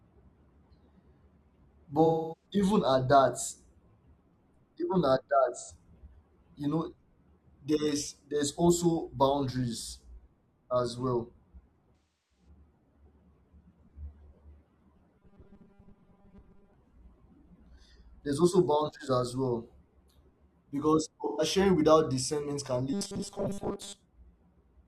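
Smeared, noisy patches interrupt the speech at 2.05–2.46 s, just before "even at", then at 5.55–5.71 s and 11.96–12.48 s. This is AAC frame loss with concealment: about 256, 85 and 341 ms of coded audio went missing, and the decoder patched each gap from the last good spectrum. From 15.17 to 16.74 s the speech becomes a rigid, metallic buzz near 200 Hz that loosely tracks the words. This robotic sound from repeated short buffers likely comes from the player looping a 5 ms chunk while most of the real audio is skipped. Another short concealed loss of 128 ms falls at 21.26–21.42 s, before "without discernment can". The same 200 Hz buzz returns from 22.93 to 24.00 s, right after "without discernment can".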